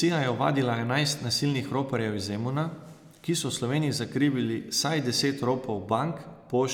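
No technical faults can be heard anywhere in this speech recording. There is nothing to place on a timeline, since no moment in the audio departs from how it should sound.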